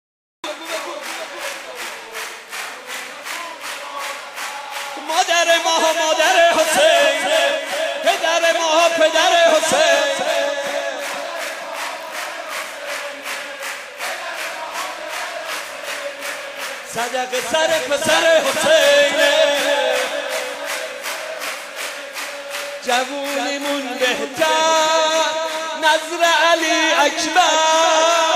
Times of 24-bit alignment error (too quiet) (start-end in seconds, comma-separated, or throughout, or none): none